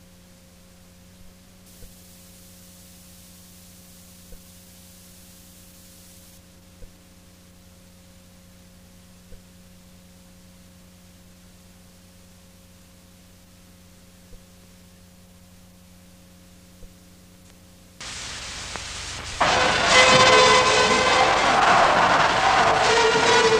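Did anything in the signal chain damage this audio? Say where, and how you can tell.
Yes, pre-emphasis was left on at playback from 1.66 to 6.38 s. The CD-style treble boost was never undone, leaving 10 kHz about 8 dB hot, so the sound turns thin, bright and sibilant.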